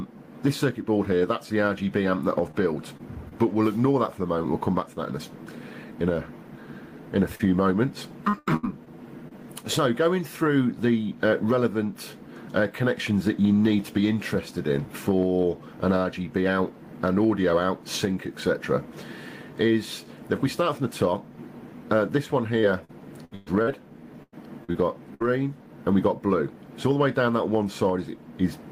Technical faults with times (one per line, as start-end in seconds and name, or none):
2.51-2.55 short concealed packet loss
2.97-3.01 short concealed packet loss
3.29-3.33 short concealed packet loss
7.35-7.41 short concealed packet loss
8.29-9.33 repeated packet loss (robotic sound)
22.61-25.22 repeated packet loss (robotic sound)